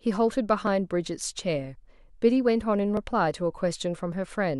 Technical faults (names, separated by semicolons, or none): clock drift buffer slips